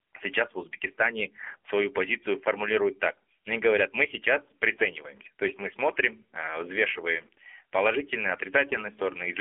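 AMR narrowband mobile codec damage runs through the whole clip. The speech has been squeezed through a telephone-style channel: nothing below about 300 Hz or above 3.4 kHz survives, so it sounds thin and boxed-in. The codec rebuilds the voice from a vocal-tract model excited by a handful of pulses per short frame, and the coarse, plainly audible buzzy, synthetic edge points to one of AMR-NB's lower modes, around 7.4 kbps.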